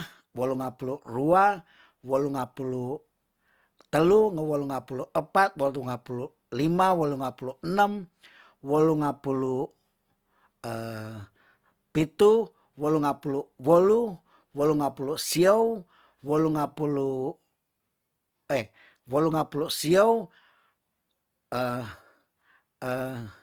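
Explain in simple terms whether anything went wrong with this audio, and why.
Something did go wrong, and it runs through the whole clip. The speech has a grainy, rough, fizzy quality from start to finish, which is what Opus compression sounds like when it's squeezed hard. The likely cause is the encoder running short of data: rather than leaving gaps, it fills the thin parts of the sound with borrowed or noisy material, so the voice stays full-range but loses its smoothness and sounds gritty.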